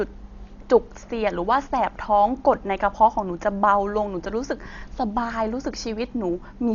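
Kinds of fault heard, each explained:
Dolby Digital compression: Across the whole speech clip the band stops dead at about 6.9 kHz. What is left sounds dull, and a rough, fluttering hiss clings to the voiced tones, where the decoder has put noise in place of detail it never received. The damage is heavy and fits a rate near 40 kbps. The likely cause is AC-3 style coding. A plain low-pass filter would also take the top off, but it would leave the remaining band clean, with no noisy flutter around the tones.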